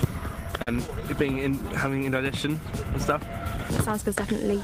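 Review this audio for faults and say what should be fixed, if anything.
Between 0.51 and 1.03 s there's a run of repeated stalls, a stutter: four short hitches where packets arrived late, the jitter buffer ran dry, and the receiver stretched the last sound to cover. That's about 79 ms of filler, longest 44 ms, nothing actually lost, but it drags. A deeper or adaptive jitter buffer on the receiving end should absorb that kind of late arrival.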